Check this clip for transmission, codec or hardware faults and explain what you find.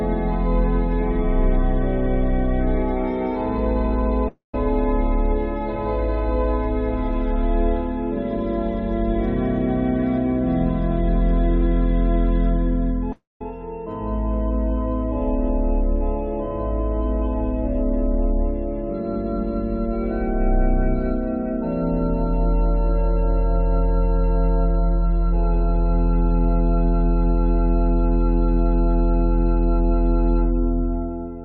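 Two gaps stand out, at 4.28 s and 13.12 s. Both sound like a long network dropout: the last sound stretches into a fading buzz for 250 ms and 280 ms, goes silent for roughly 150 ms and 200 ms, then resumes further on with that audio likely lost.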